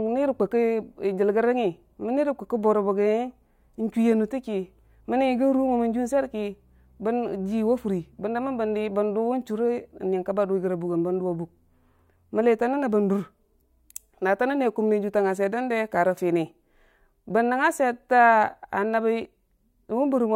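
Nothing technical stands out in this speech recording; it simply runs along as a plain stretch of talking with nothing wrong to point at.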